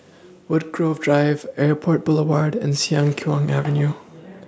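Between 0.76 and 4.02 s the automatic gain rising fault appears: the gain control judged the incoming level too low and kept turning it up, adding about 7 dB over those three-plus seconds. Because the boost is applied to the whole signal, the speech and the background noise swell together, so the room seems to creep closer while the talker's level climbs steadily. The call microphone processing, which removes the lowest bass, is heard normally.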